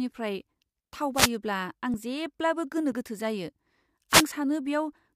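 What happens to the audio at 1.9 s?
At 1.94 s there is a short skip, just before "जेब्लाबो गोनो गोथो", with roughly 20 ms of sound gone and the two sides butted together. This is audio missing between chunks, likely from a processor working in 1.0 s chunks dropping audio at each changeover.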